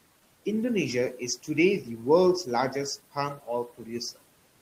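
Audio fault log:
Throughout: noise suppressor artifacts. The suppressor pulls steady background down by about 18 dB frame by frame, so the room noise, sitting about 20 dB below the speech, sinks in gaps and swells under words. On a spectrogram the noise floor pumps, with flickering residual specks between phrases.
3.68–3.89 s: speech cut by the noise suppressor. The suppressor mistook part of the speech for noise and dipped it by as much as about 12 dB, so roughly a tenth of a second sounds swallowed and faint. The waveform shows a brief notch in the envelope, and the spectrogram shows thinned energy there.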